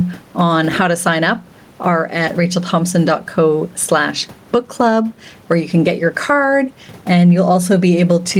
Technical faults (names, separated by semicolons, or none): gain pumping